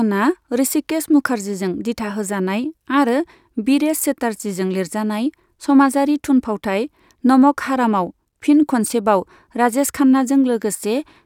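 No technical faults can be heard anywhere in the speech. There is nothing to mark at any point in the recording.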